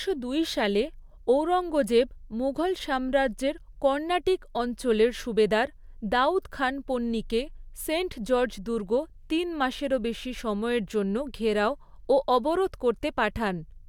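No technical faults are audible.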